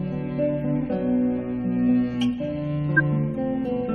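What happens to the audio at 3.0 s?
A corrupt frame decoded at 2.97 to 3.01 s: a short run of a few compressed frames had flipped bits, and the decoder played them anyway. Misread gains and codes throw energy to the wrong frequencies, producing a brief, loud chirp, squeak or burst of noise peaking near -5 dBFS.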